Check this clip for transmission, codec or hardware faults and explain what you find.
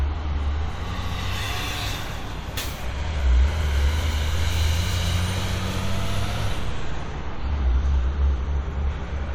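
One fault is present: mains hum. It starts at 0.80 s and runs to the end. A steady 60 Hz tone sits under the sound, fairly strong against it. A ground loop or nearby transformer is feeding the power line into the signal path.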